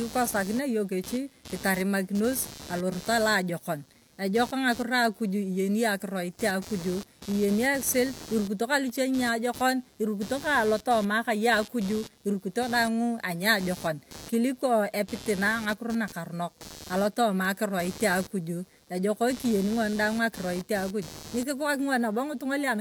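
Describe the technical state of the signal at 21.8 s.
At 21.8 s there's computer activity noise, present all through the clip. The machine's load shifts the shared ground, giving a buzzy chirp pulsing around 150 Hz, about 20 dB under the speech.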